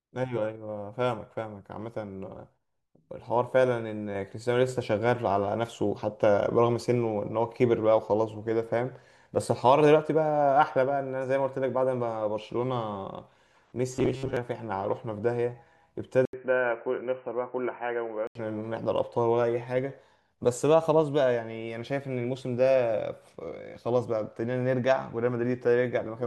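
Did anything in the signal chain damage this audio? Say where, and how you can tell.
Yes, two spots. From 13.94 to 14.37 s the speech collapses into a rigid, metallic buzz at 133 Hz that only loosely tracks the talking. That's robotic sound from repeated short buffers, most likely at the driver or buffer stage. New audio wasn't arriving in time, so most of that stretch is the last chunk looped over and over. A period of 1/133 Hz, about 7.5 ms, fits a buffer of roughly that size.

At 16.25 s there's an 80 ms gap, and then the sound goes dull and boxy until 18.35 s. The band narrows, the level drops by about 5 dB, and a new, fairly quiet noise floor appears, well below the speech. That's the signature of the input switched to a poorer device, likely a fallback mic or a headset call profile picked up at the capture stage, with its own narrow band, gain and noise.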